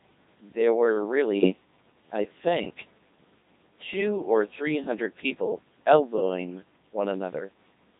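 The whole clip carries the sound of the Codec 2 vocoder. The damage is heavy. The speech is robotic and buzzy. That fits the 2.4 kbit/s mode. The decoder never keeps the waveform. It rebuilds the voice from sine waves, using only pitch, voicing, energy and a coarse spectral envelope. Natural texture is lost. What remains sounds synthetic throughout.

From 1.39 to 1.52 s there are bit errors on digital voice radio. This lasts about an eighth of a second. At such a low rate, each bit controls a whole frame's pitch, level, voicing or spectrum. Corrupting a few frames is enough. The error rate sounds like around 7 percent. The synthetic voice jumps in pitch and loudness. Its tone colour lurches. It breaks into a brief warbling, robotic gibberish before settling again.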